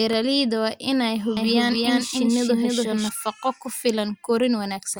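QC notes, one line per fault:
1.37–3.09 s, doubled audio track: right after "waa inay" a second, equally loud copy of the speech runs roughly 300 ms behind, dry and full-band, cutting in and out abruptly. Most likely a slower capture path grabbing the same signal twice.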